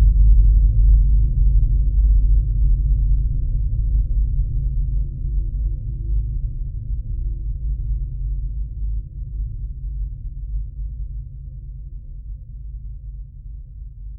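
From 0.19 s to 14.04 s, faint clock slip clicks tick through the sound. They fall at a steady rate, roughly every third of a second, around fifty in all. Each is a single-sample jump. The likely cause is two devices running on separate, unsynchronised clocks. A mismatch of around 100 ppm builds up until a whole sample must be dropped or repeated. The ticks are clearest where the sound is loud and high or sustained.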